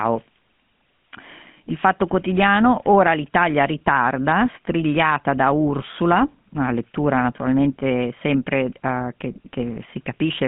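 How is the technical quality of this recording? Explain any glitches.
The technical quality is limited: the whole recording carries GSM full-rate codec damage.

Throughout the clip, the speech has passed through the original GSM full-rate codec, and the damage is plainly audible. The codec models the vocal tract and drives it with a regular pulse excitation that keeps only every third sample, so fine detail is discarded. The result is a buzzy, gravelly roughness on the speech, confined to a telephone band of roughly 150 Hz to 3.4 kHz. The data rate this implies fits 13 kbps.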